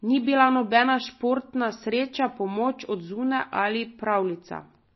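Speech that sounds watery and swirly throughout, with nothing above 5.8 kHz, pointing to low-bitrate encoding, likely MP3 compression around 24 kbps.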